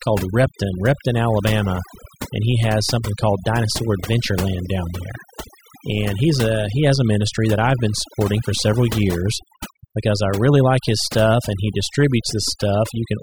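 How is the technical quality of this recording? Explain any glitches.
Overdone noise removal runs throughout. Frequency bands near the noise estimate were cut hard, taking quiet speech with them. Background twinkles.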